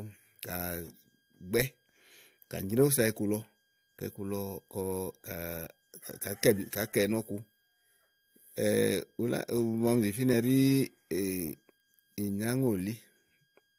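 A switching supply whistle runs through the whole recording: a thin high tone wandering between about 1.61 and 1.63 kHz, sitting far below the speech. A switching power supply is running in an audible burst mode or beating with another, so its pitch shifts slightly as load varies.

Damaged data in a compressed stream appears at 3.41 to 3.43 s and again at 10.32 s, each a brief glitch. Corrupted bytes make the decoder misread those frames, lose sync and skip ahead to the next valid frame header.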